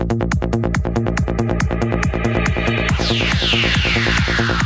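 Gain pumping runs through the whole clip: the gain ducks by around 5 dB each time a loud sound arrives, so loud and soft passages sit squashed close together. The likely cause is input gain set far too high, with a fast limiter or compressor clamping down on each peak. Through the call codec, nothing reaches above 8 kHz, which fits G.722.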